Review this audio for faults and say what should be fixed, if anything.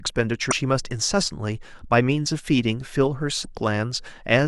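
Damaged data in the compressed stream corrupts two short stretches of this speech, from 0.49 to 0.53 s and from 3.41 to 3.45 s. At each point the decoder meets frames it cannot read correctly, loses its place and has to find the next valid frame header, so the audio breaks into a brief chirp or squawk lasting roughly 40 ms. To prevent it, protect the stream with checksummed transport and re-fetch or repair damaged frames before decoding.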